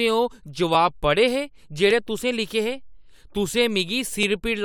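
Speech, marked by a regular click that recurs every 1.16 s from 0.75 s to 4.23 s, about four in all. The pattern points to clock drift buffer slips: two devices likely running on independent clocks that disagree by several hundred parts per million, so a buffer periodically drops or repeats a few dozen samples. On a spectrogram each slip shows as a thin, evenly spaced vertical broadband line; on the waveform, as a small abrupt step or discontinuity.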